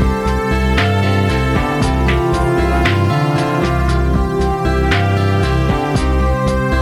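Hard clipping runs through the whole clip: the signal is driven about 6 dB past what a stage can pass, so peaks are sliced flat. Around two percent of the waveform sits on that ceiling, adding high harmonics heard as crackle on the loudest moments.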